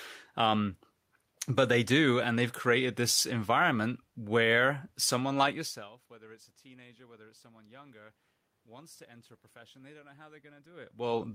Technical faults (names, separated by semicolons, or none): none